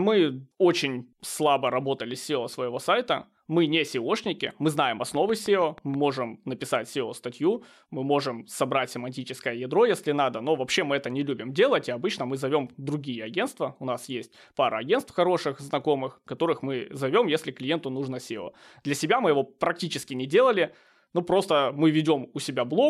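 A train of clicks runs from 5.15 to 6.11 s, starting just after "мы знаем". About seven sharp, near-identical pulses arrive at a regular 6.3 per second, peaking a few decibels above the speech, so they tick clearly over the voice and into any gaps. The steady spacing and uniform shape suggest a repeating electrical disturbance, likely interference from nearby equipment or a faulty connection or power supply injecting a pulse on each cycle.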